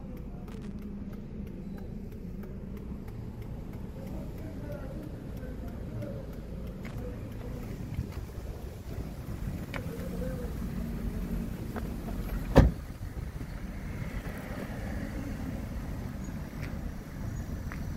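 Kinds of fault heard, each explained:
Loose connector crackle: A worn or dirty contact in the signal path keeps making and breaking as it shifts. Each break chops the audio for an instant, so it comes through as scratchy, irregular bursts. The first burst runs from about 0.47 to 0.79 s, lasting roughly a third of a second. A second, shorter burst appears at 6.88 to 6.96 s. Between them the sound passes cleanly, which fits a connection that only fails when disturbed.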